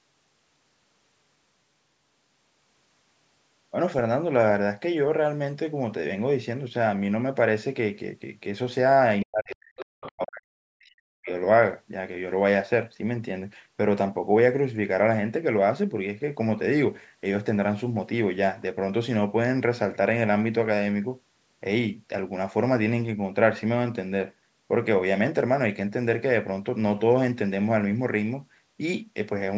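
From 9.25 to 9.79 s the talker's speech is suppressed in double talk: it plunges by roughly 40 dB, likely because the echo canceller mistook overlapping speech for echo. The waveform shrinks to a thin band and the spectrogram's harmonics fade out. From 9.78 to 10.11 s the other side's voice leaks through, about 15 dB below the speech, likely residual loudspeaker echo, showing as a faint separate harmonic trace. From 10.10 to 11.29 s the suppression returns for about a second, again near 40 dB deep, likely the same cause. The energy gap is visible across the spectrum up to the 8 kHz ceiling of the call's microphone processing.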